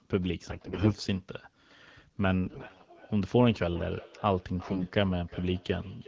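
A speech clip with two faults. AMR bit errors at 0.49–0.94 s, 2.46–2.86 s and 4.63–4.86 s make the voice hoarse, scratchy and gargly while pitch and level hold, as flipped low-protection frame bits misplace excitation pulses and skew gain and spectral values. From 2.25 s to the end, feedback echo between two devices returns the speech at roughly 0.4 s intervals, peaking at about 19 dB below the direct speech, as one device replays audio its neighbour's microphone recaptures.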